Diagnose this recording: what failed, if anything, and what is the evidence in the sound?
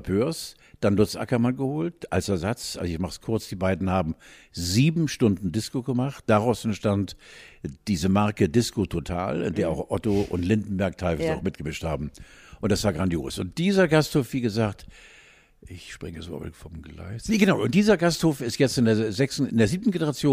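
Listening to the speech in this recording, nothing stood out that would point to a failure at any stage of the chain.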